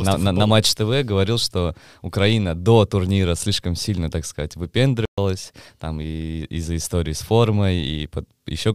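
At 5.05 s, a playback stall, likely the player starving for data, cuts the speech to silence for 124 ms before it resumes at 5.18 s.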